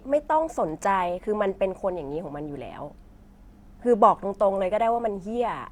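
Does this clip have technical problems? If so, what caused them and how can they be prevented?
Yes. At 1.19 s the speech skips: about 20 ms of audio is missing between chunks, likely from processing in 2.5 s blocks. The waveform shows an abrupt seam, the spectrogram a vertical discontinuity. Recording with gap-free buffering at chunk boundaries prevents it.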